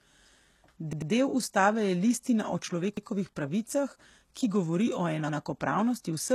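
A speech clip with gritty, metallic treble and nothing above 12.3 kHz, likely HE-AAC compression at a low rate around 16 kbps; a spectrogram shows a hard ceiling and smeared, copied-looking upper bands. A repeated buffer stutters three times: at 0.93 s (played twice more, to 1.12 s), at 2.97 s after "ustave je listina o", and at 5.29 s after "pravicah ki govori o". Each repeat lasts about 93 ms, which fits a 4096-sample buffer, and shows on the waveform as identical copied blocks with abrupt joins.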